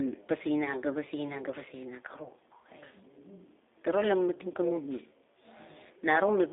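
Throughout, a G.729 codec rebuilds the speech from a few pulses per frame and a narrow 300 Hz to 3.6 kHz line band, which fits 8 kbit/s, leaving it rough, thin and synthetic. From 2.24 to 2.30 s and from 4.52 to 4.55 s, VoIP packet loss concealed by the speech codec means each gap, which fits one lost 20 ms packet, is filled by extrapolation. The sound is briefly stretched into a buzzy tone or coloured noise that fades before recovering.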